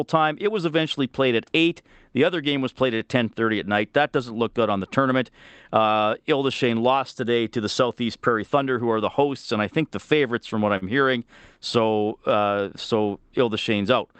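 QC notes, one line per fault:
2.95–3.02 s and 10.77–10.84 s: short stall from a late packet. Each time a packet came in late and the jitter buffer ran dry, so the receiver stretched the last sound, by 45 ms and then 42 ms, before picking up where it left off. Nothing is lost, but the held sound drags with a faint buzz or dip. A spectrogram shows flat, repeated harmonic bands, and the waveform shows periodic cycles copied.
8.43–8.81 s: jitter buffer speed-up. The buffer had built up extra delay, so the receiver trimmed pitch-period-sized pieces in quick succession, removing roughly 50 ms and playing the speech about 10% faster at unchanged pitch. It sounds briefly hurried. On a spectrogram the harmonics keep their spacing while syllables look compressed in time, and the waveform shows small splice points between cycles.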